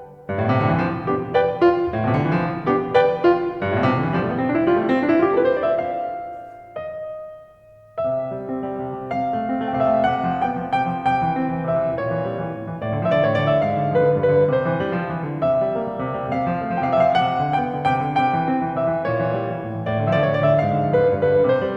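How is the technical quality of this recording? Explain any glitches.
Listening through the music, nothing stood out as a technical problem.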